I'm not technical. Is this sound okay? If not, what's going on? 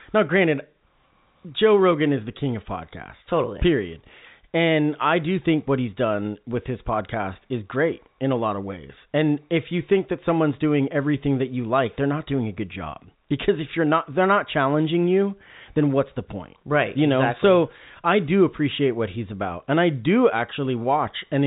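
Yes, no faults are audible in this speech clip; it has the narrow sound of an ordinary landline call, because G.711 telephone coding passes nothing above about 3.8 kHz.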